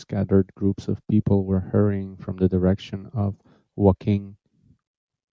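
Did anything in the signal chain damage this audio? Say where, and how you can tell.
No, nothing in this speech recording points to damage at any stage of the chain.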